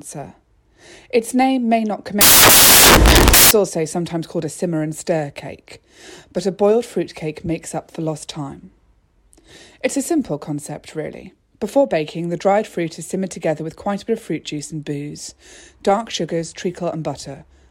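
From 2.21 s to 3.51 s, right after "name may not", the speech is swamped by a burst of loud, harsh broadband noise lasting about 1.3 s. It clears before "also sometimes called a". These are samples built from the wrong bytes: each value was assembled with its bytes misordered or misaligned, so the rapidly fluctuating low-order bits landed in the most significant positions and turned into noise.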